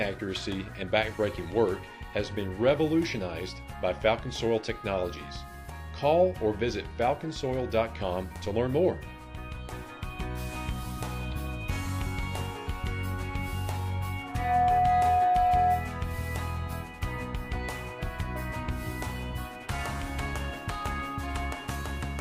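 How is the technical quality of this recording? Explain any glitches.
The recording has one clear fault: loudspeaker feedback squeal from 14.23 to 15.91 s. A microphone is picking up its own loudspeaker, and at 726 Hz the loop gain tops one, so that tone swells within a fraction of a second to roughly 10 dB above the programme. On a spectrogram it is a bright horizontal line at 726 Hz; the waveform shows a fast-rising, steady sinusoidal envelope.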